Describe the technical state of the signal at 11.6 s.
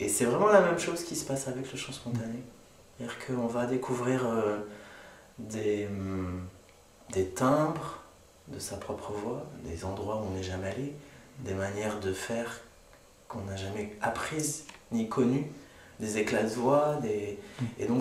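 Clock drift buffer slips run through 11.6 s, part of a series of regular clicks spanning 0.99 s to 17.96 s and recurring every 1.3 s, about fifteen in all. The likely cause is two devices running on separate clocks that disagree by around 150 ppm, so the buffer between them gradually overfills or drains until a handful of samples is dropped or repeated. Each slip breaks the waveform briefly, heard as a periodic tick in the sound.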